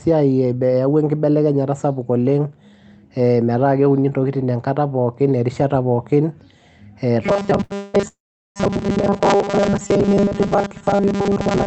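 From 7.23 s to the end, new audio likely arrived too seldom, so the receiver kept replaying a short stretch of about 5 ms while most of the real audio was skipped. That is robotic sound from repeated short buffers: speech becomes a rigid, metallic buzz fixed at 200 Hz that only loosely tracks the talker.

Within that stretch, at 7.63 to 7.72 s, a packet missed its slot and the jitter buffer emptied. The receiver held the last sound for 68 ms until it arrived and then resumed without losing anything. This short stall from a late packet is heard as a sound dragged out with a faint buzz or dip.

Two call audio freezes follow. Both were likely caused by packets held up in transit that drained the jitter buffer. The first runs from 7.76 to 7.96 s, where 175 ms of fill continues the last sound as a fading buzz or hiss with no silence. The second, from 8.08 to 8.58 s, fills 480 ms, of which 410 ms is silence. 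In each case playback picks up where it stopped, so a gap has been inserted and nothing is dropped. Through all of this the Opus call path limits the audio to an 8 kHz bandwidth.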